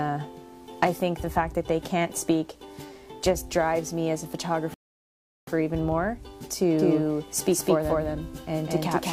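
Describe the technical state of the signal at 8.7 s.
At 8.7 s every sound arrives twice: a second, equally loud, full-band copy trails the first by roughly a fifth of a second, with no decay or room colour. This doubled audio track runs from 6.79 s to the end, likely from a second, slower capture path mixed back in.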